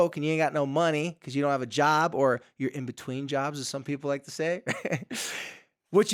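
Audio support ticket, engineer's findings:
No faults found in the speech audio on review; nothing to report against any component.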